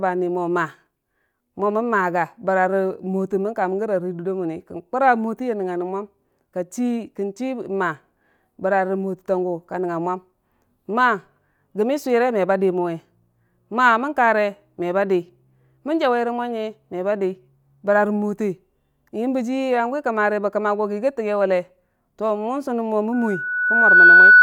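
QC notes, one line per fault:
23.12–24.42 s, loudspeaker feedback squeal: a 1.5 kHz tone swells over about a second to roughly 15 dB above the speech as mic-speaker loop gain exceeds unity.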